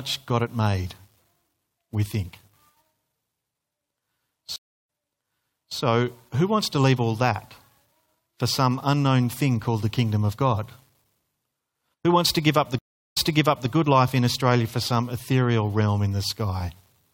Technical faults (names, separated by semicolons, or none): stream reconnect